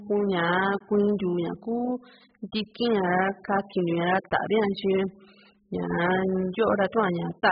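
From start to finish the speech sounds dull and smeared, with nothing above 5.1 kHz and a warbly, fizzy edge on sibilants. That's likely heavy AAC compression at a very low bitrate, where the encoder drops the top end and starves the remaining bands.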